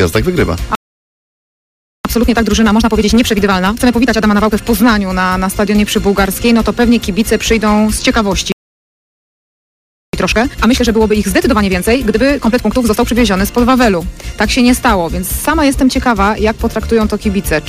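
At 0.75 s the sound just cuts out and stays silent until 2.05 s, about 1.3 seconds. That's a playback stall: the player most likely ran dry of buffered data, or its output thread got blocked, so nothing reached the output until it recovered. It happens again from 8.52 to 10.13 s, a longer gap of about 1.6 seconds, with the same abrupt drop into silence mid-flow.

Right after each stall, from 2.05 to 4.63 s and again from 10.13 to 13.13 s, you get time-compressed catch-up. The player is working off the backlog the gap left behind by snipping out tiny slices and cross-fading across the joins, so the audio runs at 1.5 times normal speed while the pitch stays put. It comes across as hurried, then settles back to normal pace once the backlog is cleared.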